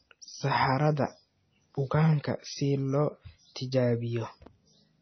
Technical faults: MP3 compression

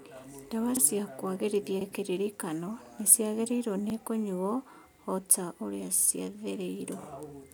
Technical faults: overlapping chunks

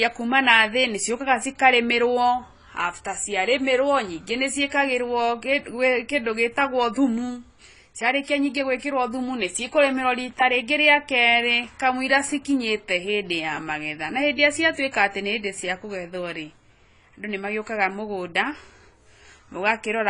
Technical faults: AAC compression

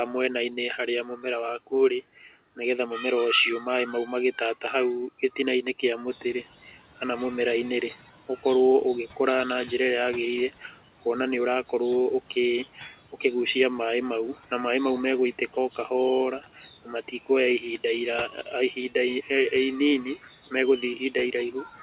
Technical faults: speech cut by the noise suppressor; noise suppressor catching up

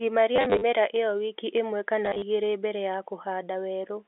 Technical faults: packet loss with last packet repeated

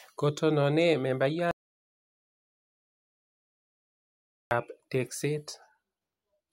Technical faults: audio dropout to silence

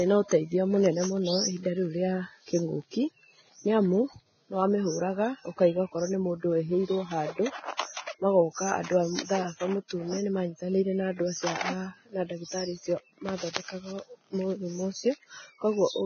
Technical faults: Vorbis compression; pre-echo

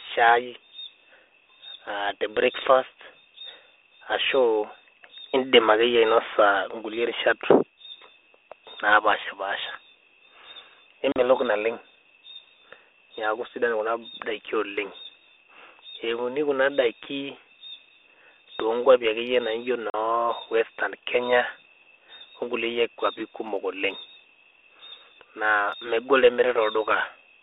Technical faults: packet loss on an ADPCM call

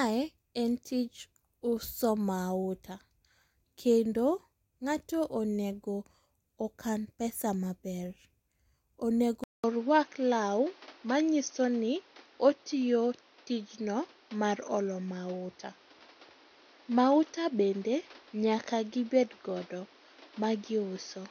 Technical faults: input switched to a poorer device

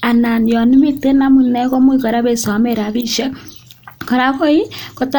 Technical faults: none

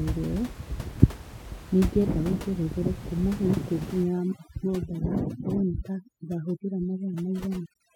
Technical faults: overdone noise removal; frames out of order

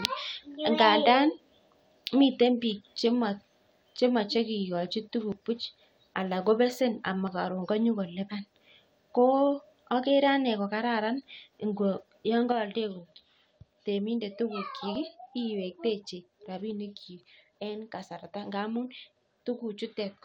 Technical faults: dropped buffer (overrun); one channel drops out

